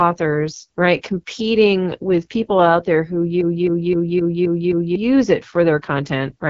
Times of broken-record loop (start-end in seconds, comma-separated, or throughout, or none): 3.41-4.95